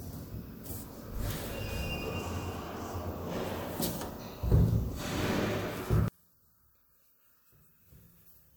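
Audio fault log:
6.08–8.56 s, one channel inverted: sound falls by about 36 dB to a faint trace, likely from reversed polarity on one channel cancelling the shared content in the mono sum.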